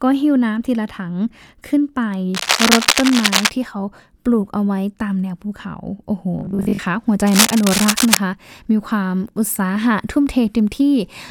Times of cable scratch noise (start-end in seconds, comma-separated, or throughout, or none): 2.34-3.50, 7.27-8.20